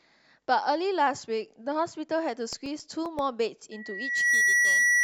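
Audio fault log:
2.40–3.19 s, CD scratch ticks: seven evenly spaced ticks, each only a few milliseconds, repeating once per disc turn; that regular rhythm separates them from random digital clicks.
3.71–5.03 s, loudspeaker feedback squeal: a 1.9 kHz tone swells over roughly 0.7 s to about 10 dB above the speech, as the loop re-amplifies itself, unlike a steady whistle.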